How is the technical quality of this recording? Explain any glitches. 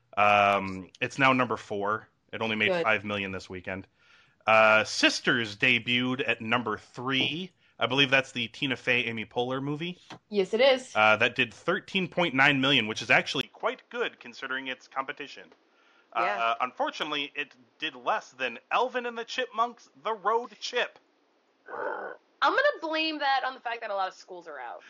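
The recording degrades partway through. At 13.41 s, right after "million which is", a brief 20 ms gap marks the likely cause: the input switched to a poorer device. From there, the sound is duller and somewhat quieter with new faint background noise. On a spectrogram, everything above 6.9 kHz abruptly vanishes, and the waveform steps down in level.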